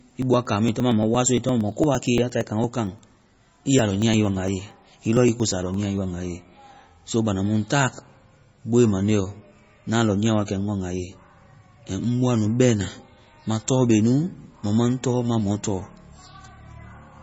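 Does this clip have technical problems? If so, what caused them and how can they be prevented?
Yes. Throughout the speech the sound is watery and swirly, sibilants turn into metallic chirps, consonant attacks are smeared, and nothing reaches above 7.6 kHz. This is likely MP3 compression at a very low bitrate, in keeping with roughly 24 kbps. Short of bits, the encoder cuts the treble at a fixed frequency and drops weak spectral lines that flicker on and off between frames. Encoding at a higher bitrate, or keeping an uncompressed master, prevents it.

From 0.11 s to 5.97 s there is a steady run of ticks every 0.115 s, about fifty in all, each where roughly 10 ms of audio is skipped outright, so the sound jumps forward rather than falling silent. This is periodic USB or driver dropouts: a background task stalls the bus or audio driver on a fixed schedule, and each stall loses a slice of the stream. 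Disabling the interfering background task or polling process, and using a larger audio buffer, prevents it.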